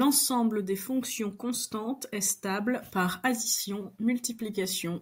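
No technical fault can be heard anywhere in this speech recording, and the signal carries through its whole duration with nothing to report.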